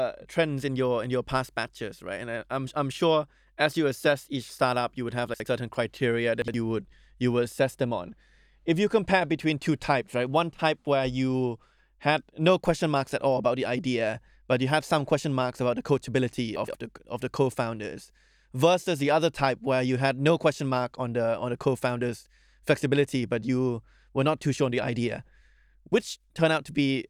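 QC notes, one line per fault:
5.34–5.46 s, 6.42–6.54 s and 16.56–16.74 s, chunks out of order: 60 ms slices play late and swap places, so you get a jumbled blip at the hard joins. Watch for it right after "startup you would have", just before "would you would assess", and between "marks about the coachability" and "the of the", where the slip is two chunks.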